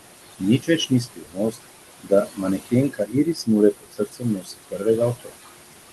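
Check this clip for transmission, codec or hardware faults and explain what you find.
Two faults come from the noise suppressor, which over-processes the speech throughout.

Noise suppressor artifacts run through the whole clip. The suppressor pulls down the bands it judges to be steady noise by about 19 dB, frame by frame. The room noise, which sits about 10 dB under the speech, drops away in pauses and swells back beneath syllables.

Speech cut by the noise suppressor happens at 0.59–1.57 s, 2.03–2.73 s, 2.89–3.49 s, 3.73–4.86 s and 5.15–5.47 s. The suppressor misreads quieter parts of the speech as noise and turns them down by about 18 to 21 dB. Soft consonants and word endings sound swallowed, adding up to roughly a few hundred milliseconds in each stretch. The 3.73 s stretch is hit hardest.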